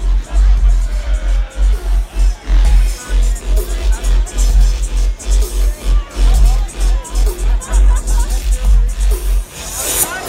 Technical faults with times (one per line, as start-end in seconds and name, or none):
none